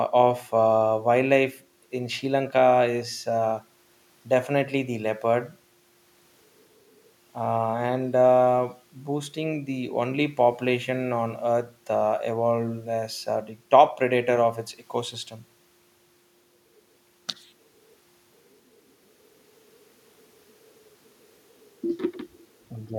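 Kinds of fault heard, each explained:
Nothing stood out on listening to this speech recording.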